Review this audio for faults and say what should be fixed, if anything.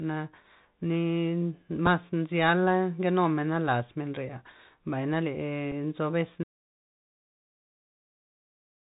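Throughout the speech there is a scratchy, band-limited sound with grainy hiss, harsh s sounds and nothing above 4 kHz: the Bluetooth CVSD headset codec, whose one-bit up-down steps cannot track loud high content. Record through a wideband or wired microphone instead of the headset's narrowband voice link.

Small ticks at 1.86 s and 5.72 s, the second just after "menrea mbay na", are Bluetooth headset packet repeats, where a lost packet was replaced by replaying the previous 3.8 ms. Keeping the headset close to the receiver, away from interference, reduces lost packets.

From 6.44 s to the end the speech stops and there is silence with no room tone. This audio dropout to silence likely comes from the input link failing while the recorder kept writing silence. Checking the connection and input level during recording would catch this early.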